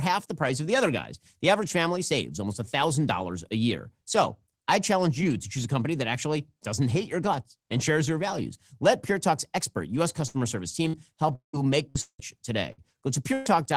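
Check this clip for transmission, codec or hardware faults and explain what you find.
The speech has repeated network gaps in its last few seconds: five short bursts of packet loss and two longer dropouts, all between 10.27 and 13.48 s.

Burst of packet loss at 10.27–10.37, 10.88–10.96, 11.89–11.98, 12.72–12.81 and 13.34–13.48 s: consecutive packets never arrived, so the receiver stretched the last sound into a fading buzz or hiss for 50–70 ms (118 ms in the last), then jumped ahead, skipping 60 ms (120 ms at the end).

Long network dropout at 11.35–11.56 and 12.01–12.21 s, likely from the stream stalling: the receiver extended the final sound for about 170–180 ms, and it decayed into a brief silence of 120 ms and 80 ms before the speech resumed with roughly 180 ms gone.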